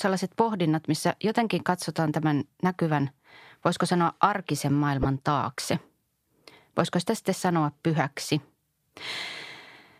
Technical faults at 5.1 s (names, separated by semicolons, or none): corrupt frame decoded